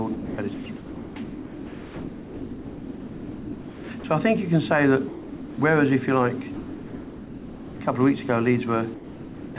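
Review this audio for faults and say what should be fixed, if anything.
The sound repeatedly gives way to steady comfort noise at 0.14–0.38, 0.54–0.66, 0.76–1.16, 1.24–3.90, 4.00–4.04, 5.08–5.58, 6.54–7.80 and 8.94–9.56 s, likely sound dropped by the voice detector treating real content as background. The band-limited sound, with nothing above 4 kHz, comes from the call path. Lower the detector's sensitivity threshold or lengthen its hangover time so quieter content keeps being sent.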